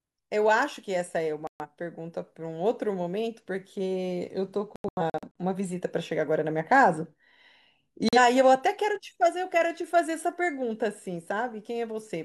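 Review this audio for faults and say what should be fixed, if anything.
The speech drops to silence at 1.47–1.66 s, breaks into several short holes between 4.76 and 5.28 s (about 300 ms lost, longest about 85 ms), and gaps briefly at 8.09–8.18 s. This is a digital broadcast dropout: the receiver muted whenever frames arrived corrupted or missing, and gap lengths in steps of about 43 ms fit whole lost frames. The muted speech is gone and cannot be restored, so the fix is a clean re-recording or a better receiver feed. Improving antenna placement and signal strength, or capturing from a wired or higher-margin source, would prevent these dropouts.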